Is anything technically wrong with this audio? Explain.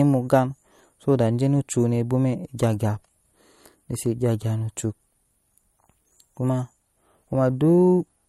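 Yes. Throughout the speech there is plainly audible MP3 compression damage. The encoder has likely been starved of bits, which fits a low bitrate around 48 kbps. It cuts the top end completely, with nothing above 15.9 kHz. It also drops weak spectral lines that then flicker in and out between frames. The result is a watery, swirly texture over the speech, with consonant onsets softened and smeared instead of crisp.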